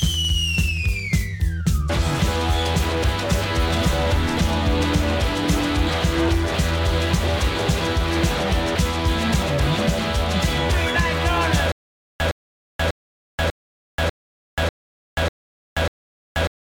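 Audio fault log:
11.72 s to the end, stutter with silent gaps: the same short burst of about 112 ms repeats eight times at a steady pace, each followed by roughly 482 ms of dead digital silence, so a fragment returns every 594 ms or so until the clip stops. This likely comes from the stream or player stalling and replaying its last buffered fragment at each retry before running empty, so the audio due in those gaps never plays.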